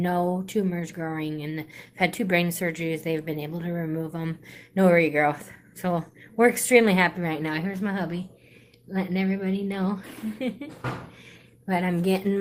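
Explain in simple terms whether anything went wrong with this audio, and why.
Nothing went wrong here: the audio signal comes through intact, with no breaks, glitches or distortion anywhere in it.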